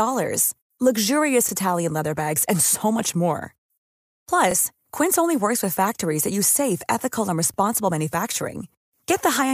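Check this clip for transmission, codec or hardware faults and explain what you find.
There's one fault here, overlapping chunks, and it shows up three times in this speech clip: 1.49 to 1.51 s, 4.51 to 4.54 s, and 7.54 to 7.56 s. The audio was handled in 3-second blocks, and each new block starts about 25 ms before the previous one finished, so that sliver gets played twice at every join. You hear it as a click or hiccup in the speech, landing at those regular 3-second intervals.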